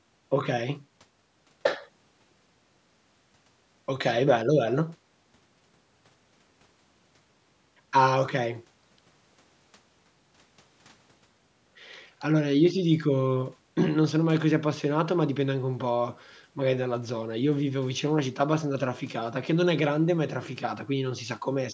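No technical faults can be heard anywhere in the speech. The sound has passed through a call's microphone processing, which rolls off the lowest bass.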